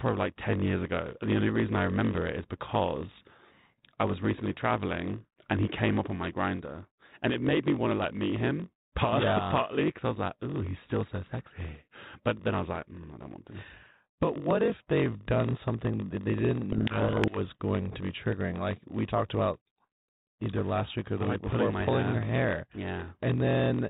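Throughout, a steady 46.9 Hz buzz comes from a block size mismatch (padded). Short zero-filled blocks, which fits a 1024-sample read size, slow the speech to 0.938 speed.

From 16.72 to 17.38 s, between "done something that they" and "going to be triggering", a codec payload misread flips the bit order of the G.726 code words, burying the speech in harsh distortion.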